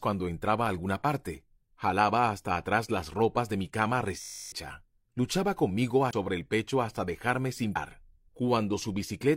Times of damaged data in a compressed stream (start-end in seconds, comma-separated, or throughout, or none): 6.09-6.14, 7.71-7.77